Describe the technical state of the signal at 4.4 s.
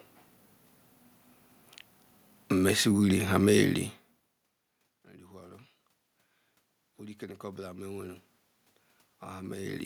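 At 4.4 s the signal is intact, with only the room's own background noise beneath the speech and a level change from the talker moving relative to the microphone, neither of which is a system fault.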